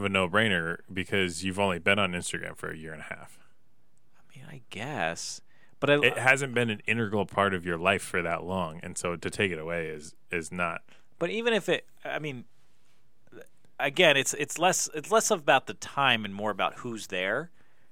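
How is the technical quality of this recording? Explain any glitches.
The technical quality of the recording is sound, with no glitches to explain.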